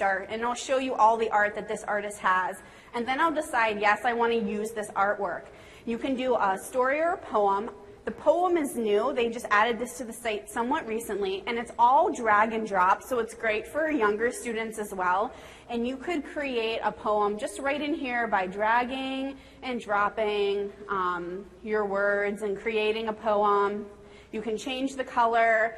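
Nothing in here goes wrong at any point, so there's honestly nothing to flag.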